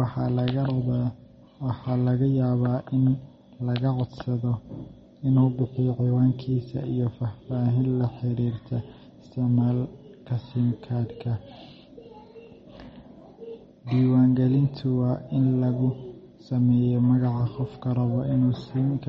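MP3 compression throughout: the speech is likely starved of bits, fitting roughly 32 kbps, so treble stops near 8.3 kHz and weak detail swirls watery, with chirpy s sounds.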